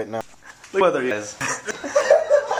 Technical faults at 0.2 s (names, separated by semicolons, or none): audio missing between chunks